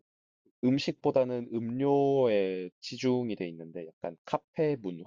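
No technical faults can be heard anywhere in the speech recording, with the signal holding steady and continuous throughout.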